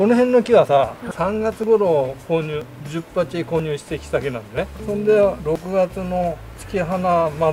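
Audio missing between chunks at 1.64, 2.62, 3.60, 4.58, 5.56 and 6.54 s: regular skips, each losing roughly 20 ms, likely dropped as each 1-second chunk closes and the next opens.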